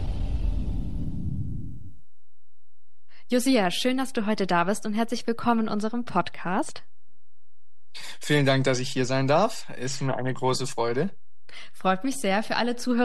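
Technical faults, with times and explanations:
Throughout, DC offset: the entire waveform sits shifted to one side of the zero line by a constant amount, so every peak and trough is measured from a displaced centre. Being a fixed shift rather than a vibration, the offset carries no audible tone of its own. It shows up as steady energy at 0 Hz at the very bottom of the spectrum and uses up headroom on one side.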